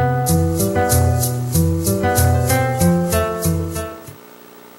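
Harsh, gritty crackle rides on the loudest moments across the whole clip. It sits on top of the peaks rather than smearing every sound into fuzz. This is hard clipping. The signal was driven about 7 dB beyond what some stage in the chain could carry, so the tallest parts of the waveform were sliced off flat. Only a small share of the audio, roughly one or two percent, hits that ceiling. Each flattened peak throws off high harmonics, and that is the brittle edge heard on the loud peaks.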